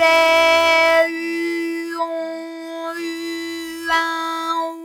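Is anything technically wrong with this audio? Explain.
Yes, two faults run through the whole clip.

A noise suppressor was applied to music or sounds and left running for the entire clip. Tuned for speech, it treats sustained tones, room ambience and decay as unwanted noise and pulls them down, letting only sharp onsets pass cleanly. The gain reduction here swings by around 10 dB, so held parts of the sound sink away after each attack and tails are cut short, giving a pumping, fluttering, thinned-out character.

Periodic clock jitter is also present throughout. The converter's sampling clock is being wobbled by interference at a single rate, around 3 kHz, so every frequency in the sound picks up extra sidebands spaced that far above and below it. Higher-pitched content is hit hardest. The result is a rough, metallic edge that rides on top of the sound whenever something is playing and vanishes in silence.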